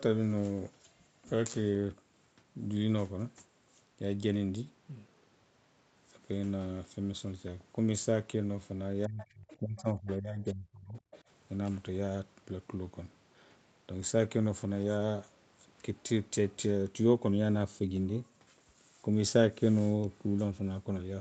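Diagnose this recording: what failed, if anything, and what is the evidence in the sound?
Call processing stage, speech suppressed in double talk: between 9.07 and 10.97 s the speech keeps ducking, around a second and a half in total, and at its deepest it drops roughly 30 dB. The likely culprit is the echo canceller, which couldn't tell the talker from the far end and clamped down on both.

Same stage, the other side's voice leaking through: brief scraps of a second voice show up at 9.50–9.56, 9.78–9.82 and 11.11–11.19 s, sitting around 25 dB under the speech. That's likely residual loudspeaker echo the canceller failed to subtract from the mic.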